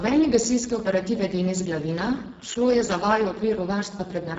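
From start to finish the speech carries heavy Speex codec damage. This CELP coder has too few bits to model the excitation properly, so the voiced sound comes out hoarse, grainy and noisy, which fits a very low setting of around 6 kbps. Nothing is present above 7.6 kHz, and the upper band beneath that ceiling sounds like shaped noise rather than real detail, adding a hissy, synthetic edge.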